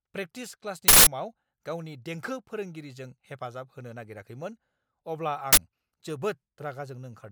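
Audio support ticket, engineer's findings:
Loud digital noise bursts at 0.88–1.07 s and at 5.53–5.57 s, after "होनो नागिराखैमोन अब्ला". Uninitialised buffer: playback read unwritten memory. Lengths of about 186 ms and 46 ms fit 8192- and 2048-sample blocks.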